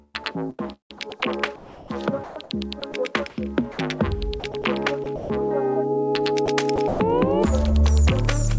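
Sound chopped by the voice detector occurs at 0.24 to 3.78 s, 4.40 to 5.30 s and 6.46 to 7.00 s. Parts of the sound drop out to synthetic comfort noise, totalling 0.94 s, 0.24 s and 0.16 s. Nothing sounds above 8 kHz, which fits a G.722 call path. The likely cause is the sender's detector switching transmission on and off.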